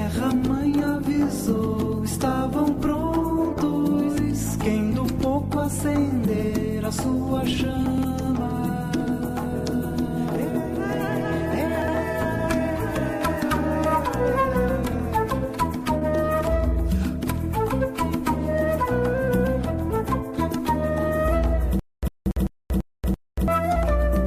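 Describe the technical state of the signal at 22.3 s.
At 22.3 s two faults overlap. The first is a stutter with silent gaps, running from 21.79 to 23.48 s. A fragment of about 103 ms plays, then about 234 ms of digital silence follows. The cycle repeats every 337 ms, five times in all. It is heard as a short burst returning at an even pace. The cause is likely a stalled player or stream that replays its last fragment at each retry and then runs empty. The audio meant for those gaps is lost.

The second fault is chunks out of order, from 22.08 to 22.32 s. A 60 ms chunk plays three chunks late, after the ones that should follow it. Nothing is missing, but the sequence is scrambled. This creates three hard joins where the audio does not line up. The moment sounds jumbled and garbled. The moment asked about falls at the end of this span.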